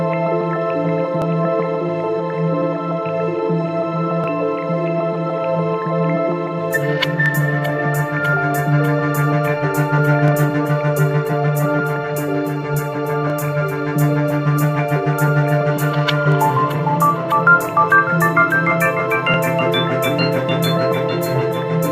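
Overlapping chunks at 1.22, 4.24, 7.26, 10.28, 13.30, 16.32 and 19.34 s: each new 3 s chunk begins 20 ms before the previous one ends, so that sliver plays twice at every join, producing a brief click or stutter that recurs at a steady rhythm.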